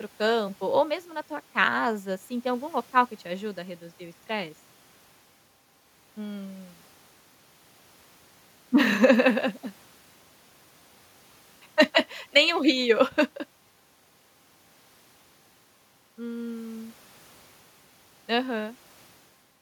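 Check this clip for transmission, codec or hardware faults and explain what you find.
Nothing audible in this speech recording points to a transmission, codec or hardware fault.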